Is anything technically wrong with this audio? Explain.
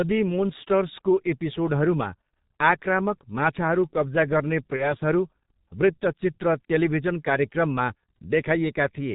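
Yes. A G.723.1 codec runs throughout: its 30 ms frames and heavy compression, fitting roughly 6.3 kbit/s, cut everything above 4 kHz, leaving the speech muffled and hoarse, with smeared consonants.

VoIP packet loss concealed by the speech codec occurs from 4.76 to 4.94 s, just after "आक्रामक माछाहरू कब्जा गर्ने". The decoder extrapolates over a gap that fits one lost 30 ms frame, stretching the sound into a buzzy tone or coloured noise that fades and stays distorted after packets resume.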